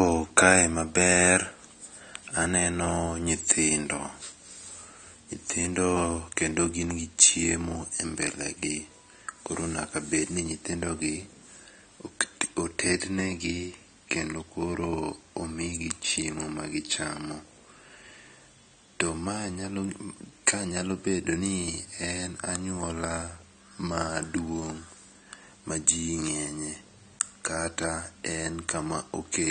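AAC compression damage runs through the whole speech clip: nothing is present above 9.1 kHz, leaving it dull, and sibilants and held sounds take on a smeared, warbling fizz. The likely cause is AAC-LC encoding at a low bitrate, consistent with roughly 32 kbps.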